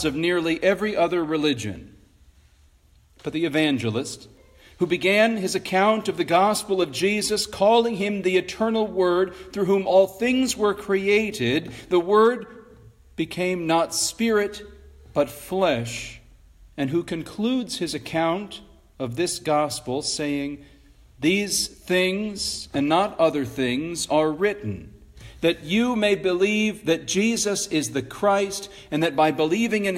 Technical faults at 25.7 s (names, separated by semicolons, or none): none